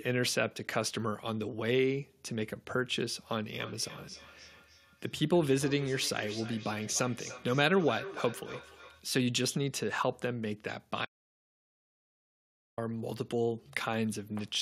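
From 3.57 to 9.06 s, thin ringing repeats trail the speech every third of a second, peaking about 14 dB down: feedback echo between two devices, one replaying the other's microphone.

From 11.05 to 12.78 s, the speech cuts to total silence with no room tone for 1.72 s. This is an audio dropout to silence, likely from lost input.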